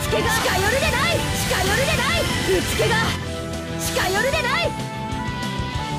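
From the very start until 3.16 s, a doubled audio track is heard: a second full-band copy of the sound trails the original by about a second, at roughly the same level, with no added reverberation or tonal change. Likely a second capture through a slower path mixed back in. On a spectrogram, every pattern repeats one second later at matching intensity; the waveform shows overlapping duplicates that stop abruptly at 3.16 s.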